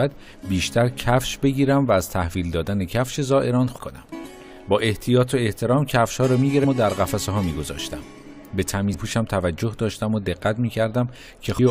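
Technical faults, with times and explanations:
3.77, 6.63, 8.93–8.95 and 11.58 s: damaged data in a compressed stream. Each is a brief chirp or blip under about 22 ms. Corrupt bytes make the decoder misread those frames and lose sync. It then hunts for the next valid frame header.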